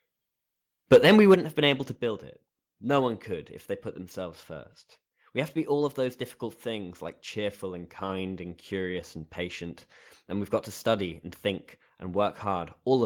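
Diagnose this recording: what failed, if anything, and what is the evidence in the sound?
Microphone overload, 0.91 to 1.34 s, just before "have been able to": the loudest peaks go flat-topped and take on a harsh, crackling edge, with a few percent of samples pinned at the converter's limit. This is at the converter stage. The likely cause is microphone input gain set too high, driving peaks about 5 dB past the converter's limit, so their tops are sliced off and the squared waveform adds dense, gritty harmonics.

Microphone volume stepped down, at 0.96 s and again at 1.95 s, just after "have been able to": the sound and its background drop abruptly, about 2 dB at the first step and about 4 dB at the second. The first step lands inside the distorted stretch. This points to the call-processing stage, where automatic gain control likely reacted to the overloading input by cutting the device's input volume in discrete jumps rather than a smooth fade.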